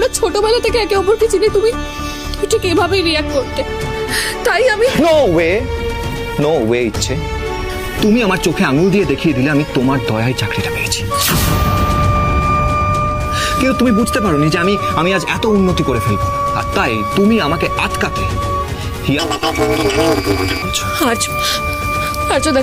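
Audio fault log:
19.19–20.63 s, planar audio read as interleaved: each 5.33 ms block of separate left and right samples is read as alternating pairs, so it plays twice at double speed. Blocks this short give a robotic buzz near 188 Hz, not the clean octave jump longer blocks would give, and this buzz tracks block rate rather than pitch.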